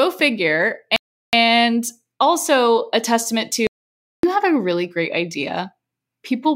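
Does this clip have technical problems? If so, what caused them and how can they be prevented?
Yes. From 0.96 to 1.33 s the speech stops for 367 ms and then resumes. This is likely a Bluetooth stall, in which interference delayed packets until the headphone buffer emptied. Keeping the phone close and away from congested 2.4 GHz sources prevents it.

From 3.67 to 4.23 s, after "also a testament", about 565 ms falls to silence with no room tone before "have a really great". This audio dropout to silence likely came from a briefly lost input. Securing cables and connections and watching input levels while recording prevents it.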